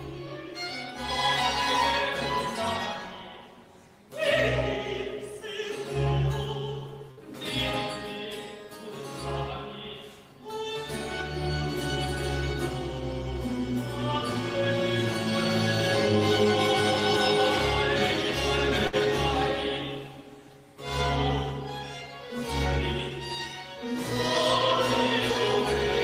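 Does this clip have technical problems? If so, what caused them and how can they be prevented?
Yes. There are two bursts of packet loss, at 7.11 s and 18.87 s. Each loses about 60 ms of audio. The receiver stretches the last sound across the gap and fades it out, then the sound resumes further on. A larger jitter buffer with forward error correction would prevent this.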